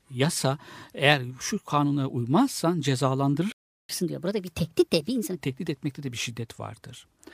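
At 3.52 s the player most likely ran short of data, or its output thread was held up, so nothing reached the output until it recovered. This is a playback stall. The speech breaks off mid-flow and the clip goes silent for about 0.37 s, resuming at 3.89 s.

From 3.89 s, starting with "tehdit etmekte de bir", the player works off the backlog it built up during the gap by resampling it faster. This is catch-up at higher speed. For about 1.5 s the speech runs at 1.25 times normal speed, and because resampling shifts pitch along with tempo, it also sits about four semitones high, giving a hurried, raised, chipmunk-like quality. The effect ends at 5.37 s.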